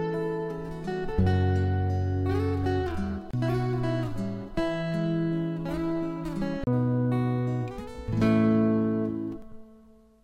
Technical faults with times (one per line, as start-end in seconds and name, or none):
3.31-3.33 CD skip
6.64-6.67 CD skip